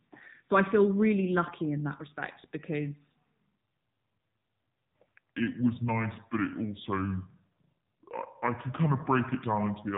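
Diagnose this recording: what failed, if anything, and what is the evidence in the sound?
The call path went through the AMR narrowband mobile codec. Nothing above 3.8 kHz survives, and the coding damage is plainly audible, which fits a low rate near 7.4 kbps.

A section at the wrong speed starts at 3.63 s and runs to the end: the speech plays at 0.66 times speed, about seven semitones lower, likely from a playback clock mismatch.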